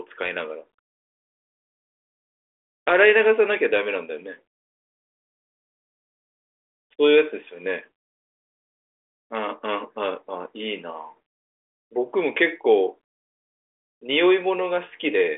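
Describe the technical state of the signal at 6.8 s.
At 6.8 s the signal is intact, with the speech passing cleanly through the 40 kbit/s G.726 ADPCM telephone path, its band limited to roughly 300 Hz to 3.5 kHz and nothing above 3.8 kHz.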